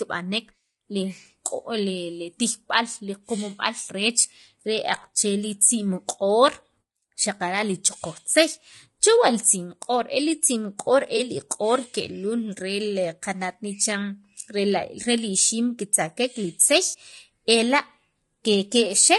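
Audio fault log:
throughout — low-delay AAC compression: speech sounds rough and grainy, with noise between harmonics; likely AAC-ELD's short frames at a bitrate that fits about 32 kbps.
11.17–11.20 s, 16.87–16.97 s — AAC frame loss with concealment: smeared, noisy patches where the decoder rebuilt missing audio from the last good spectrum; the second gap is longer.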